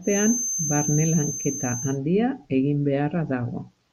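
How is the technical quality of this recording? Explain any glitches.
The recording has one clear flaw, a feedback whistle. From 0.0 to 2.0 s a loudspeaker-to-microphone loop is likely sitting just at the edge of feedback, sustaining a thin, steady 6.3 kHz whistle a few decibels below the speech, swelling and fading slowly in level without building up.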